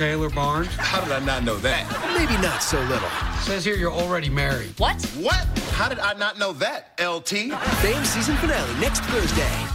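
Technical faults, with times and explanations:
No technical faults detected.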